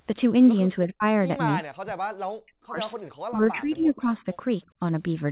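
Speech, passed through a call path that stops at 4 kHz, consistent with a narrowband codec such as G.711, shows three stretches where the talker is pulled down: 0.86 to 1.03 s, 1.8 to 2.79 s, and 3.29 to 4.24 s. In the first two the level falls by as much as about 40 dB, and in the third by around 15 dB. The pattern points to speech suppressed in double talk, likely caused by the echo canceller meeting simultaneous far-end playback and, unable to separate the near talker from loudspeaker echo, attenuating everything it hears. At 4.67 to 4.77 s the room background drops by about 20 dB for roughly 70 ms and then recovers. That is background gated by the echo canceller, which clamped the microphone hard while the loudspeaker was active and released it once playback eased off.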